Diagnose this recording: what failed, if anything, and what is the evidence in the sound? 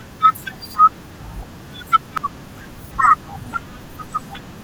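The fault lies in the compressed stream: damaged data in a compressed stream, heard as a single brief blip at 2.18 s that cuts across the speech. The bytes at that point were corrupted, so the decoder could not parse the affected frame correctly, lost frame sync and scanned forward to the next valid header before resuming. The instantaneous, isolated character of the artefact points to localized corruption rather than a buffer or network dropout pattern.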